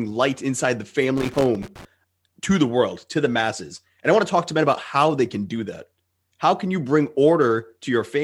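Right after "light inside the", from 1.17 to 1.85 s, there's loose connector crackle: a worn contact chopping the signal, giving irregular scratchy bursts before "to the".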